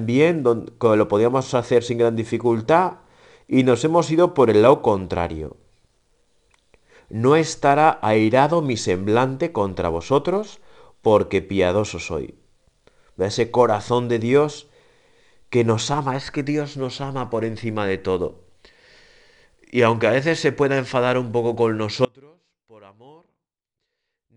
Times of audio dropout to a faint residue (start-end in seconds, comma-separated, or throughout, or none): 22.05-24.36